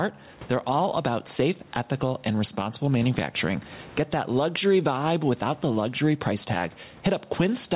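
Gain pumping runs through the whole speech recording. The gain swings by roughly 15 dB, pulling down as each loud phrase begins, likely from input gain set far too high feeding a fast limiter. On the waveform the peaks look flattened and squashed together. On a spectrogram the speech sits beneath the 4 kHz ceiling of the call path.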